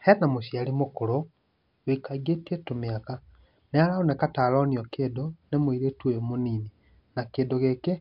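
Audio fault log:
No faults were detected in this speech recording.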